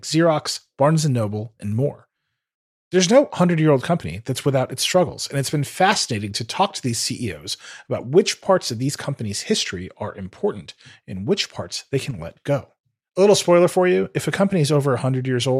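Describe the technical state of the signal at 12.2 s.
The speech level drops abruptly by about 6 dB for a brief 77 ms stretch, from 12.11 to 12.19 s, then snaps back. This is likely one channel dropping out: with one stereo side lost, the mono sum keeps only half of the shared signal.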